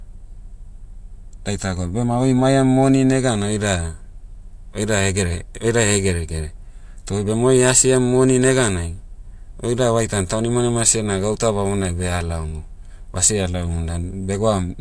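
No technical faults are audible anywhere in the recording.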